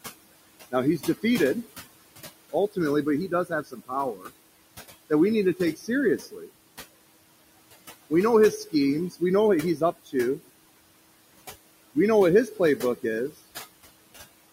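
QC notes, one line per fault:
Throughout: noise suppressor artifacts. The room noise, about 16 dB below the speech, is pulled down by about 20 dB in the gaps and rises again under the speech, so it pumps and flutters. On a spectrogram the noise floor appears as patchy, flickering blocks.
0.71–1.24 s, 3.28–4.31 s, 5.55–6.5 s, 9.1–9.22 s, 9.77–10.49 s, 12.47–13.38 s: speech cut by the noise suppressor. Quiet parts of the speech are mistaken for noise and dipped by about 15–21 dB. The deepest dip follows "but he", and others fall between "know his" and "know what" and just after "know what". In each span, totalling roughly a tenth to half a second, syllables sound swallowed. The waveform shows sudden hollows, and on the spectrogram the energy in those frames drops sharply.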